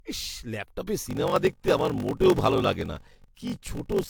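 From the start the speech sounds swirly, smeared and hollow, with blurred consonant onsets: generation loss, likely from several passes through a lossy codec, which fits AAC at around 96 kbit/s. On a spectrogram, fragmented holes speckle the upper bands.

From 1.07 s to the end, a block size mismatch (padded) sets in. Each block the next stage reads, which fits 1024 samples, is only partly filled, and the remainder is zero-padded. A 46.9 Hz buzz results, and playback slows to 0.861 times speed at about normal pitch. The waveform shows regular silent notches, and the spectrogram shows evenly spaced vertical gaps.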